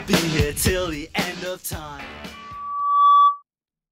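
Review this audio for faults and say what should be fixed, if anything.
The mic-to-speaker loop gain exceeded one at 1.2 kHz, so a loudspeaker feedback squeal swells from 2.33 to 3.43 s, peaking about 10 dB above the sound. To prevent it, lower the microphone gain, move the mic away from the loudspeaker's path, or notch 1.2 kHz.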